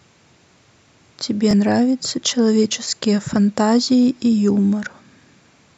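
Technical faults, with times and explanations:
1.51–1.53 s, Bluetooth stutter: a single gap of about 20 ms in the speech, bridged by the receiver replaying its last short slice of audio while the missing data failed to arrive. The brief repeat sounds like a tiny catch or flutter, and the speech resumes as if it had played on, which fits the loss of one packet.
4.03–4.05 s, Bluetooth stutter: the same 20 ms repeat-and-skip recurs, heard as another brief hiccup.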